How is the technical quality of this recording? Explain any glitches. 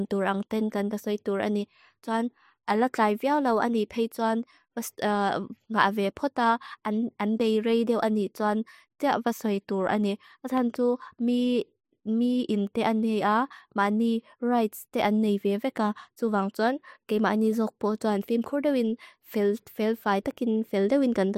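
One glitch stands out in the speech. At 10.58–10.76 s, just after "vasoi dur an ni", a loud pop: two sharp thumps, somewhat louder than the speech, likely a voltage pulse from a plug or switch. The speech continues underneath, unlike a dropout.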